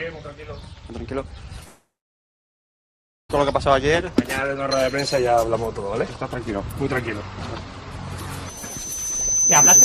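From 1.63 to 3.31 s the sound stops: the last moment smears into a briefly fading buzz, then about 1.4 s of near-silence, and playback resumes with the gap's content missing, not delayed. That points to a long network dropout, likely, rather than a mute or edit.

At 8.46 s a single 6.1 kHz tone emerges and swells over roughly a second and a half until the clip ends, finishing about 10 dB above the programme. Its self-growing rise marks a loudspeaker feedback squeal, not a steady interfering tone.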